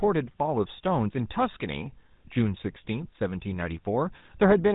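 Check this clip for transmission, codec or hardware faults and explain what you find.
The speech has passed through the GSM full-rate codec, and the damage is plainly audible throughout. This coder models the vocal tract as a filter and excites it with a sparse, regularly spaced pulse train, so fine detail in the excitation is discarded, which fits the 13 kbps full-rate scheme. The result is a buzzy, gravelly roughness over the whole voice. On a spectrogram, energy stops abruptly at about 3.8 kHz, with blank space above and smeared, grainy harmonics below.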